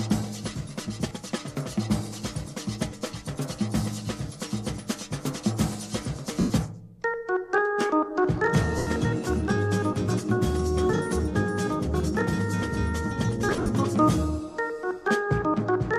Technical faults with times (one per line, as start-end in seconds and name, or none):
1.09-1.11 lost LE Audio frames
6.40-6.50 lost LE Audio frames
8.78-8.87 lost LE Audio frames
13.49-13.69 lost LE Audio frames